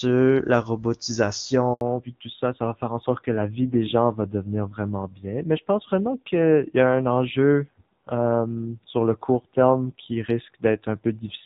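At 1.73 s, a handover gap: the call switched networks and no speech frames arrived for 80 ms, so the sound drops out abruptly until 1.81 s. From 1.81 s to the end, a fallback to narrowband: the link left the HD Voice wideband codec, heard cleanly before the gap, for a narrowband one. Everything above 4 kHz disappears, leaving the speech duller and rougher, which fits a low-rate narrowband mode.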